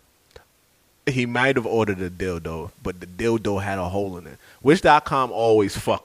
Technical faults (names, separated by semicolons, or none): digital radio blending to analogue